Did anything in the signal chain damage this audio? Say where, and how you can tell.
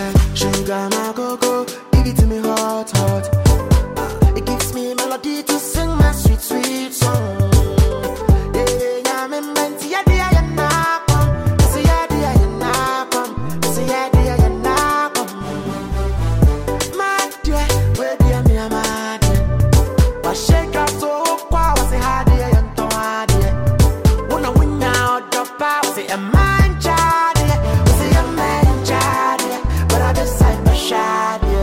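No, no signal-chain damage heard.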